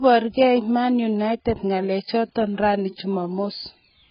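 From start to finish the speech is dull and smeared, with nothing above about 5.1 kHz and a warbly, fizzy edge on sibilants. That's likely heavy AAC compression, AAC-LC starved of bits, which fits a bitrate somewhere near 12 kbps, so it drops the top band and blurs what's left.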